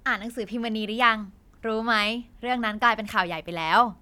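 Speech, with no technical fault audible anywhere in the recording. Nothing in the signal calls for a time or a cause to be noted.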